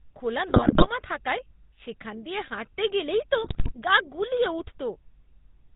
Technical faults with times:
0.00-5.75 GSM full-rate codec
0.48-0.88 GSM bit errors
3.44-3.73 GSM bit errors

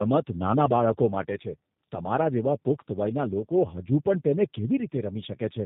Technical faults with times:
0.00-5.66 tandem speech coding

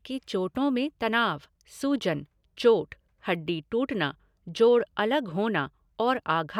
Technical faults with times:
none

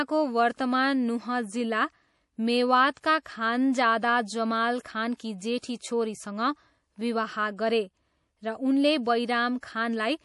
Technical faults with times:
0.00-10.25 MP3 compression
3.01-3.04 pre-echo
4.82-4.85 pre-echo
5.17-5.20 pre-echo
5.59-5.80 pre-echo

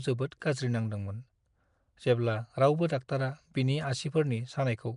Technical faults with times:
0.00-4.97 Nellymoser compression

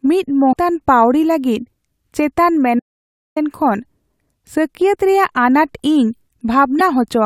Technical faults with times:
0.49-0.54 damaged data in a compressed stream
2.80-3.36 audio dropout to silence
6.79-6.81 damaged data in a compressed stream

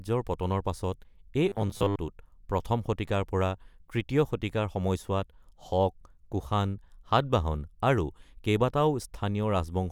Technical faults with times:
1.49-1.97 robotic sound from repeated short buffers

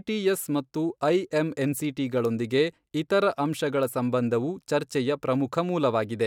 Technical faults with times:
none

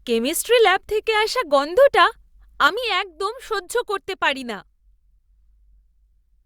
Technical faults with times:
2.67-6.45 one channel drops out

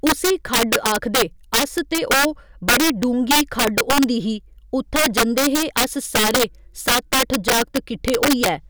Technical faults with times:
0.00-8.69 integer overflow

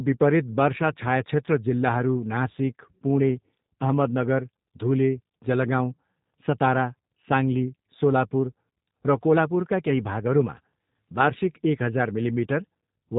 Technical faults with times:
0.00-13.19 G.729 codec

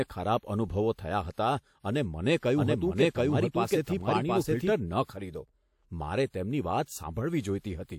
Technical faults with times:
2.57-4.73 doubled audio track

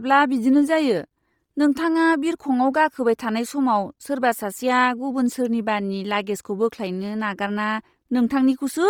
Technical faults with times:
0.00-8.89 Bluetooth LC3 compression

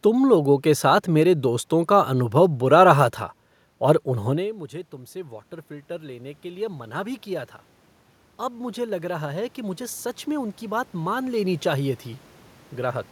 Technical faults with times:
4.06-7.55 automatic gain rising
8.39-12.03 automatic gain rising

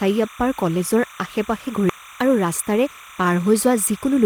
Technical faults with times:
0.00-4.26 timecode bleed
1.89-1.91 skip ahead
1.99-4.19 jitter buffer speed-up

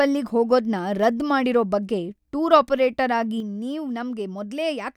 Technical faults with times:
3.40-4.97 one channel drops out

